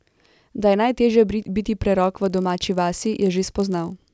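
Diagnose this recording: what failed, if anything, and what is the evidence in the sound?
Sample-rate conversion: from 2.04 s, the resampler restarted on every 20 ms block, so speech carries a 50 Hz buzz, seen as regular vertical spectrogram lines.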